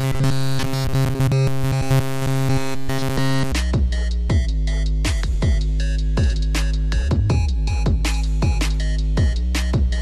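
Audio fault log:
0.01 to 3.53 s, robotic sound from repeated short buffers: the sound becomes a rigid, metallic buzz fixed at about 134 Hz. It still loosely tracks the shape of the audio underneath. The likely cause is new audio arriving too seldom, so playback keeps looping the last tiny slice, about 7.5 ms long, over essentially this whole stretch. The true material between is skipped. That steady repeat rate forces the constant buzz pitch.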